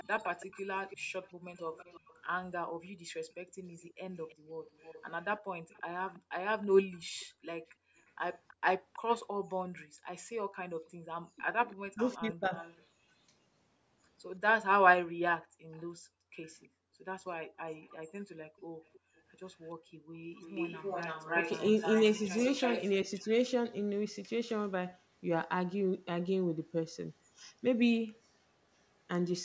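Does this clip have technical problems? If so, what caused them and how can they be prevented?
Yes. The speech has three kinds of fault, all tied to a loudspeaker-based call.

Echo leak is heard from 0.0 to 9.24 s, 11.71 to 12.83 s, 15.72 to 15.84 s and 17.84 to 22.84 s, as a copy of the speech trailing it by 325 ms. It is about 35 dB down in the brief 15.7 s scrap, about 20 to 25 dB down early on, and loudest from 17.84 s at about 10 dB below the speech. The fixed 325 ms lag sets it apart from room reverberation, which smears continuously rather than repeating at one delay. The likely cause is a far-end echo canceller failing to remove its loudspeaker's output from its microphone. Prevention: use a headset at the far end, or lower its speaker volume so the canceller can converge.

Background gated by the echo canceller appears from 2.68 to 4.56 s, 6.19 to 11.05 s and 15.08 to 20.15 s. The room tone drops by about 40 dB in bursts totalling roughly 0.7 s, 1 s and 2 s, then returns. 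Only the ambience vanishes, not the talker, which distinguishes it from a connection dropout that silences everything. The canceller's suppressor clamps the microphone whenever the loudspeaker plays. Prevention: enable comfort-noise insertion or a gentler suppression setting.

Speech suppressed in double talk occurs from 11.33 to 12.44 s. The voice dips by as much as about 40 dB in pieces adding up to roughly 0.7 s, overlapping an echo burst. Unlike gating, the talker's voice itself is cut, not just the background. With both sides speaking at once, the canceller likely could not separate them and attenuated everything. Prevention: use a canceller with proper double-talk detection, or full-duplex headsets.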